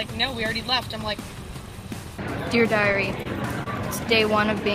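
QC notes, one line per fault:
2.81–3.26 s, repeated stalls (stutter): packets kept reaching the receiver late or more slowly than playback consumed them, so the jitter buffer emptied four times within this stretch. Each time the receiver held the last sound going until data arrived, filling 59 ms in total, with the longest wait 29 ms and about 13% of the span concealed. Nothing is lost, but the audio drags and stutters across this range.
3.63–3.67 s, short stall from a late packet: one packet missed its playout time as the network delay grew by 28 ms, and the jitter buffer ran dry. The receiver stretched the preceding sound for 28 ms until the packet turned up, then continued from the same point. No audio is missing; instead a sound is held too long, heard as a buzz or a dip in the flow.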